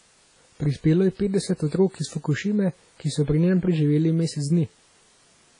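Speech runs through the whole clip with a washy, ringing quality, as if each syllable trails a smear, and a hiss that swells and fades with the voice rather than sitting steady underneath it. Nothing is heard above about 10.1 kHz, so the top end sounds cut off. This is likely WMA compression at a low bitrate, around 24 kbps: the transform coder spreads its quantisation noise over long blocks and discards weak spectral detail, so the damage here is heavy.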